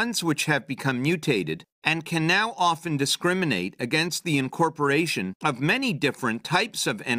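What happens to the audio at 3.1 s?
Nothing goes wrong at 3.1 s; the audio carries on intact through that moment, with no dropout, click, distortion or other technical fault.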